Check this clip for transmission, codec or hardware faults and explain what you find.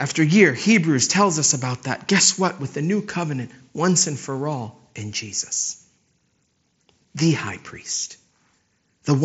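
No faults found: the speech carries the expected band limit of the Bluetooth mSBC headset codec, with nothing above 7.7 kHz and a light grain on louder syllables.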